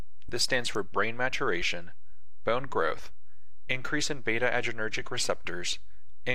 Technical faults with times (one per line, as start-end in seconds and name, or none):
0.00-6.34 DC offset